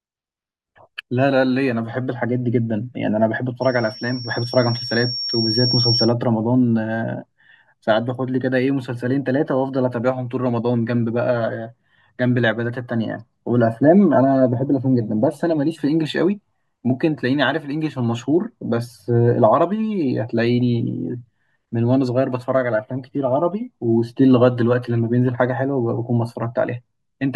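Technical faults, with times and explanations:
3.61 to 6.14 s, loudspeaker feedback squeal. A single piercing tone near 5.5 kHz rises out of the speech. It swells over roughly two seconds until it sits about as loud as the talker. The microphone is hearing the loudspeaker it feeds. At this one frequency the loop returns more than it receives, so each pass round the loop adds to the tone. That is why it grows on its own, then holds until it stops at 6.14 s.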